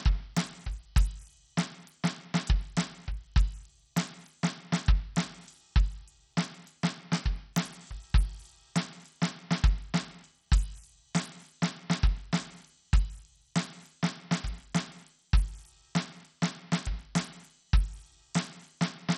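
A music clip with heavy Bluetooth SBC compression damage throughout: nothing above about 16.1 kHz, flickery treble, and a gritty grain with aliasing on top. It's likely a starved SBC link, and the damage points to a low bitrate, around 64 kbps, with the upper sub-bands getting almost no bits.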